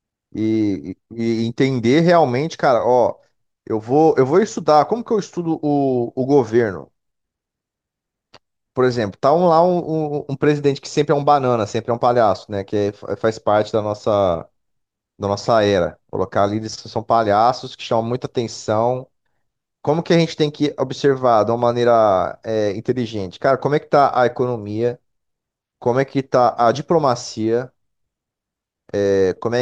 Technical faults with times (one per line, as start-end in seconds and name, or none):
none